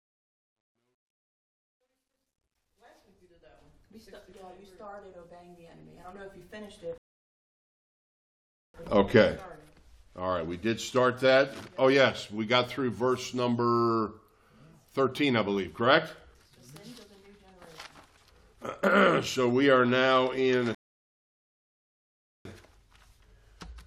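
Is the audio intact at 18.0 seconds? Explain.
Yes, the audio at 18.0 seconds is intact, with no fault of any kind at that moment.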